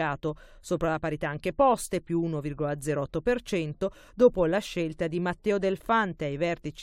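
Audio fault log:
No audible faults detected.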